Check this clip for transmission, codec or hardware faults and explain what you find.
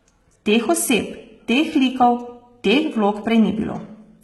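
Two faults are present: codec damage throughout, and one skip near the end.

Throughout, the treble is cut off at 11.8 kHz, with heavy gritty, metallic sibilance. This is likely HE-AAC compression, rebuilding treble from copied lower bands, and fits roughly 16 kbps. A spectrogram shows a hard ceiling and smeared, repeated upper bands.

At 3.22 s, a dropped buffer (overrun) likely skips ahead by a few milliseconds. Unread samples were overwritten, so the audio jumps audibly and the waveform shows a discontinuity without silence.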